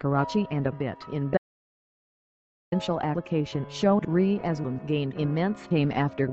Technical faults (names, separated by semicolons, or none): audio dropout to silence